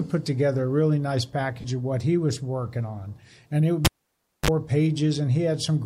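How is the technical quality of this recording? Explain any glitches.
The recording has two distinct faults: a short dropout of wireless audio frames and a cable being pulled and reinserted.

Lost LE Audio frames, 1.61 to 1.64 s. For about 30 ms, which fits three lost 10 ms frames, the Bluetooth LE Audio stream stopped delivering data. The LC3 decoder filled the gap by repeating the last good spectrum with randomised phase signs. Tonal content briefly turns into a noisy, grainy smear before the real signal resumes. The gap is too short for the concealment to fade much.

Cable pulled and plugged in, 3.85 to 4.50 s. A live cable is yanked out and pushed back in. You hear a pop as the connection breaks, then roughly 0.61 s of near silence while the plug is out. As it goes back in, only the tip makes contact at first. This produces a brief burst of 50 Hz mains buzz lasting about 0.05 s. A second pop follows when the sleeve seats and the sound returns.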